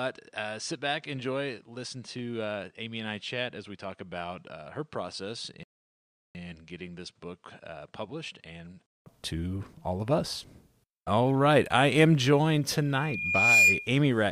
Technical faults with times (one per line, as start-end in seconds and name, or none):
0.00-9.06 input switched to a poorer device
5.63-6.35 rebuffering stall
12.93-13.95 loudspeaker feedback squeal